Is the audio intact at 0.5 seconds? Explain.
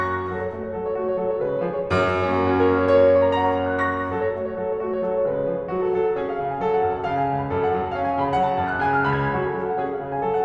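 Yes, the music plays cleanly and without interruption at 0.5 s, with no fault at that moment.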